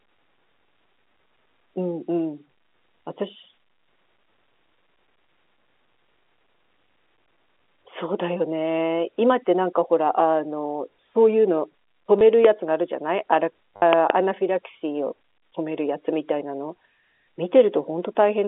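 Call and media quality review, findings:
Packet loss with last packet repeated: short robotic stutters at 12.19–12.21 s (20 ms) and 13.76–13.82 s (60 ms). The jitter buffer replays stale audio that is misaligned with pitch. The gap lengths fit 10 ms packets, giving a 100 Hz buzz on the longer run.

Loud pop: a single sharp pop at 12.45–12.47 s, about 15 dB over the speech, and a double pop at 13.93–14.12 s, about 20 dB over. Speech continues underneath both. The likely source is a voltage transient from a connector, switch, static or driver glitch, briefly shaped in the downstream circuitry.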